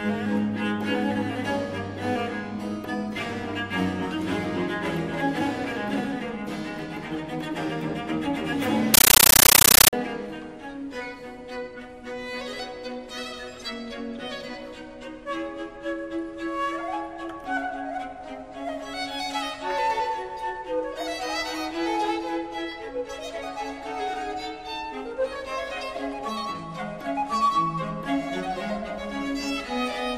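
From 8.94 to 9.93 s, a compressed stream is played as audio. Undecoded data becomes loud, chattering static, made of 13.3 ms noise bursts at 31.25 Hz.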